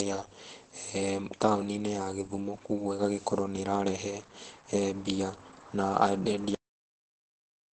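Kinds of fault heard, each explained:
Opus compression, throughout: The speech sounds muffled and hoarse from start to finish, with nothing above about 8.4 kHz. This points to a low-bitrate speech codec, likely Opus in its speech (SILK) mode at a wideband setting. At a rate in the region of 12 kbps the encoder models the voice coarsely and drops the upper spectrum entirely. That leaves this dull, rough, heavily damaged quality rather than a swirling or watery one.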